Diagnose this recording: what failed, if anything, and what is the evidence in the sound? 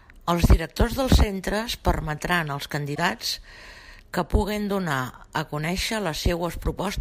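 At 2.94 to 2.98 s the speech skips forward, and in its place is a damaged stretch about 40 ms long, roughly one and a half 26.1 ms frames. The likely stage is the codec, specifically a broken MP3 bit reservoir. When frames are lost, the next frame reaches back into the reservoir for borrowed bits and decodes the wrong data. On a spectrogram this shows as a brief break in the harmonic pattern, and on the waveform as an abrupt discontinuity.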